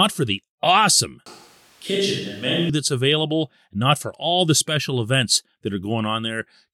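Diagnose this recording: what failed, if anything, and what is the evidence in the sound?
From 1.26 to 2.70 s the speech abruptly turns roomy and hollow, loses bass, drops about 5 dB and sits over background noise roughly 30 dB down, then snaps back. This is likely a switch to a distant microphone, with the close mic's feed lost at the analogue capture stage.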